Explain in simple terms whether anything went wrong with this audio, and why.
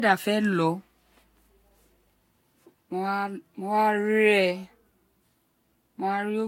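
The speech sounds swirly and hollow throughout, with blurred starts. That is generation loss, likely from being squeezed by a lossy codec a few times over.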